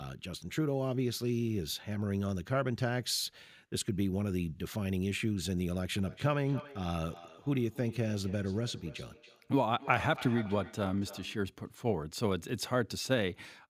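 Feedback echo between two devices runs from 6.01 to 11.48 s: a second device on the same call replays this microphone's signal, which is picked up again and missed by the echo canceller. The speech returns roughly every third of a second, thinner and ringing, peaking about 15 dB below the speech.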